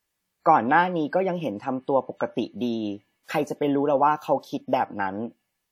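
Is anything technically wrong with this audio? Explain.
Yes, the speech carries audible WMA compression damage from start to finish. Long transform blocks smear quantisation noise tens of milliseconds around each sound, giving a ringing, washy hiss that breathes with the signal, which fits a bitrate near 48 kbps and points to a likely WMA encoder. A spectrogram would show speckled gaps where weak lines are zeroed and noise smeared before onsets.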